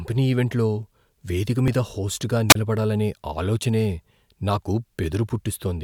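At 2.49 to 2.55 s comes a wireless microphone squelch dropout. The radio signal fades, hiss rises briefly, then the receiver mutes the speech for about 31 ms.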